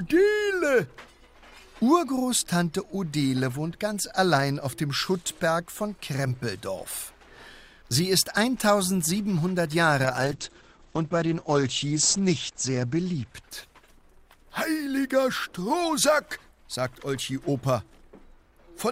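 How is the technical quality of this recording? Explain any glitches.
The recording has one clear fault, a call bitrate drop from 10.04 s to 17.25 s. The call's bandwidth estimate collapsed and the encoder was pushed from a rate that fits about 64 kbps down to one that fits about 10 kbps, bottoming out for roughly 2.4 s. Short of bits, it coded more coarsely and narrowed its band from 20 kHz to 8 kHz, so the sound turns muffled and rough until the rate climbs back.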